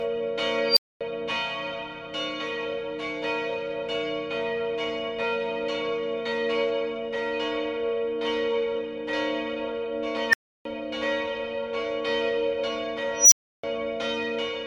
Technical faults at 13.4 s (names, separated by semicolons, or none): unstable filter